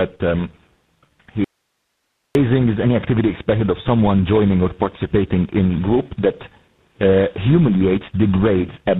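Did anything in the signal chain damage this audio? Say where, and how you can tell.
Yes, in two places. Throughout the clip the speech sounds rough, muffled and warbly, with nothing above about 3.8 kHz. That is tandem speech coding: the call passed through three speech codecs in a row (G.726 at 16 kbit/s, then G.726 at 24 kbit/s, then GSM full rate at 13 kbit/s), with G.711 links between them. Each border decoded and re-encoded the signal, so every coder compounded the previous one's errors.

From 1.44 s to 2.35 s the speech cuts out abruptly for about 0.9 s, leaving only faint hiss at around 55 dB below the speech level, then returns just as suddenly. This is an audio dropout to a faint residue. The hard edges rule out a pause or a fade, and the hiss shows the path after the break stayed live. The likely cause is a brief loss of the signal upstream in the network or call path.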